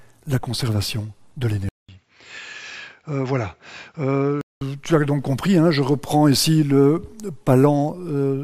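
At 1.69 s the audio drops out for 200 ms, then returns a few decibels quieter, duller and capped near 7.6 kHz, with a new faint noise floor, until 4.61 s. The likely cause is the input switched to a poorer device mid-recording, then back.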